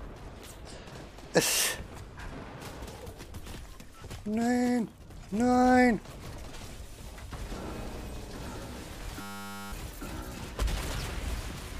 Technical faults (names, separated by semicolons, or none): system hang loop